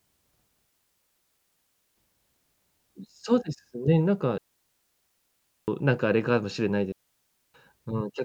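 At 0.67 s the speech drops into a clean hole of near silence until 1.97 s, a classic digital wireless dropout: the receiver lost too much data and muted with a quick fade, no noise burst either side. It happens again from 4.38 to 5.68 s and from 6.92 to 7.54 s.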